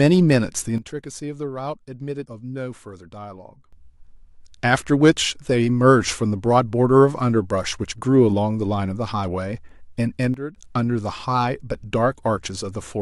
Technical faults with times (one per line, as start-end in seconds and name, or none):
0.78-3.73 sudden gain jump
10.34-10.56 sudden gain jump